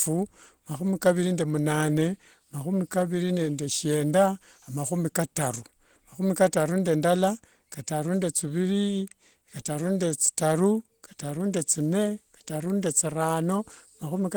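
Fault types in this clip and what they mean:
Opus compression: Throughout the speech, the codec damage is plainly audible. The lower range sounds hoarse and muffled, and the upper range turns grainy and noisy, though content still reaches about 20.2 kHz. That mix points to the encoder's hybrid mode, in which a speech coder handles the low band while the top band is rebuilt from coarse band energies. The roughness fits a low rate of around 16 kbps, the likely cause here.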